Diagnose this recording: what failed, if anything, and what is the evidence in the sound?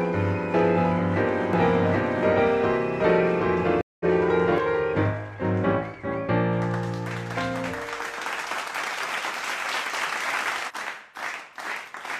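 At the mixing or capture stage, a doubled audio track is present, likely a second, slower capture path feeding the same signal. From 1.53 s to 4.58 s, an equally loud, full-band copy trails by roughly 0.7 s, with no decay or room colour, starting and stopping abruptly.

At the network stage, a stream reconnect occurs when the connection drops and the player restarts its decoder mid-stream. At 3.81 s the sound goes silent for 188 ms, then resumes at 4.05 s about 150 ms further on, with the first frame fading in.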